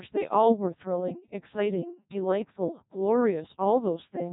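From start to end the speech carries heavy Codec 2 vocoder damage, consistent with about 1.2 kbit/s: the voice is rebuilt from sine waves, sounding robotic and buzzy. A spectrogram shows smeared, blocky harmonics and nothing above 3.8 kHz, and the waveform no longer matches natural speech.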